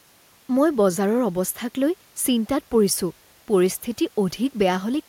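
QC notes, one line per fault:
No faults found: level, timing and continuity hold steady across the whole recording.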